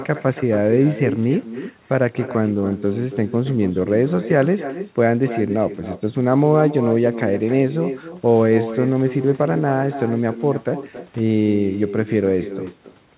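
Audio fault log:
throughout, echo with no canceller: the far-end loudspeaker leaks into its microphone unremoved, so the speech returns roughly 300 ms later as a copy about 11 dB quieter.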